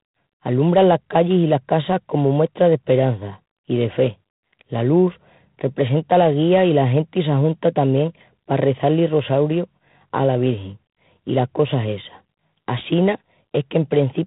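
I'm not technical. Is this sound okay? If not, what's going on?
No. From start to finish, this speech carries G.726 ADPCM damage, the kind of compression used on cordless and telephone lines. Instead of storing the sound itself, it stores rough guesses of how each moment differs from the last, and here those guesses are coarse. Unlike ordinary background hiss, which stays steady, this rasping hiss rises and falls with the voice, loudest when speech is loudest. Everything above 3.9 kHz is also missing, giving a thin phone-line sound.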